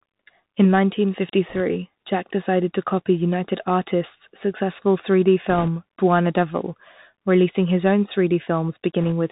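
Throughout, the speech passes through a Bluetooth CVSD headset codec, consistent with a 64 kbps one-bit stream. Everything above 4 kHz is cut, s sounds turn scratchy, and a granular hiss sits underneath. At 1.49 to 1.61 s, 5.50 to 5.69 s and 9.02 to 9.12 s, bit errors on the Bluetooth voice link, at roughly one or two percent, add brief rushing, crackly noise without sharp clicks.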